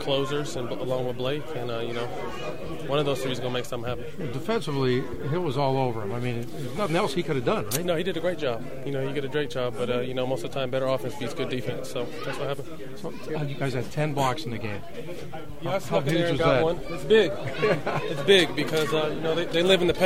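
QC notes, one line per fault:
No faults found in this clip. Nothing in the audio calls for a QC note.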